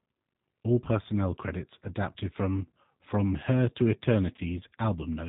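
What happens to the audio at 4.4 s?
Right around 4.36 to 4.40 s there's a dropout handled by VoIP packet loss concealment. The gap lasts about 20 ms, which fits one lost packet. The decoder just carries on from its last pitch and filter settings at falling gain, so you hear a brief smear, buzzy or noisy, rather than silence, and the sound stays a bit weak for a few tens of milliseconds after.

That moment also sits inside the G.729 codec sound that runs through the whole clip, which fits an 8 kbit/s G.729A stream. Everything above 4 kHz is gone, and the sparse pulse-based rebuild of each 10 ms frame gives the speech a plainly rough, slightly synthetic edge.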